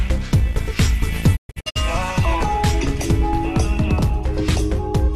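From 1.35 to 1.77 s the sound drops out in several short holes, each fading to silence within about 20 ms. The longest gap lasts 120 ms, and about 264 ms is missing across a 384 ms span. This is a digital broadcast dropout: the receiver muted on bad frames, which points to roughly eleven frames lost, and it resumed once good frames returned.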